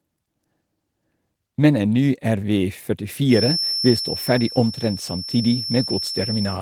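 A loudspeaker-to-microphone loop, likely sitting right at the edge of feedback, puts a feedback whistle into this speech recording from 3.26 s until the clip ends at 6.61 s. A single tone near 5.4 kHz keeps ringing without building into a howl. It is heard as a thin, steady whistle behind the speech, around 10 dB below it, swelling and fading slowly in level. The full-band Opus voice coding passes it through along with everything else.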